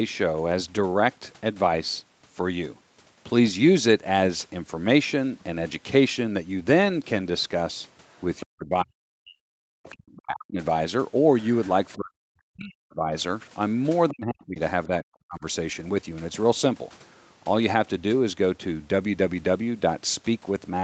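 Speech over a call path whose band stops at 8 kHz has three kinds of fault. Lost packets rebuilt from error correction occur at 1.73–1.79 s, 5.73 s, 6.85–7.23 s, 11.65–11.71 s, 13.49–13.55 s, 15.63–16.09 s and 18.69 s. None leaves a gap. Instead the voice briefly turns grainy and hissy as the decoder plays the coarse low-bitrate copy carried in the next packet. The two longest patches, about 0.4 and 0.5 s, come from many separate losses, 10 and 12 packets. On a spectrogram these spans show blurred harmonics and a noisier, more uniform fill, while the waveform stays continuous. The other side's voice leaking through appears at 8.08–8.46 s and 9.83–9.94 s as a faint second voice roughly 20–25 dB below the talker. It is likely loudspeaker echo that the echo canceller did not fully remove, and it shows as weak, unrelated harmonic traces under the main voice. Speech is suppressed in double talk at 8.44–9.45 s, 9.91–10.59 s, 11.96–13.13 s and 14.1–15.45 s. 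The talker's level drops by as much as around 40 dB, likely because the echo canceller turned everything down while both sides spoke. The waveform envelope caves in, and the spectrogram thins to near-blank holes.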